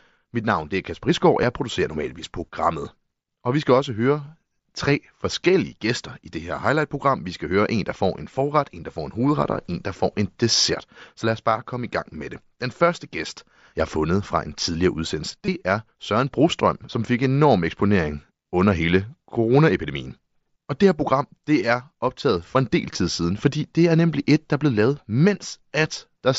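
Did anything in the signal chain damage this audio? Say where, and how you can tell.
Yes. Concealed Bluetooth headset packet loss on the headset-to-phone link: 1.42 s, before "jeg producerer normalvis programmet"; 15.45–15.48 s, after "fra en tidligere udsendelse"; 22.93 s, between "optaget for en del" and "siden fordi det er". The receiver patched 7.5, 22.5 and 15 ms gaps with repeated recent waveform, which shows as copied periodic cycles and a small seam where real audio resumes.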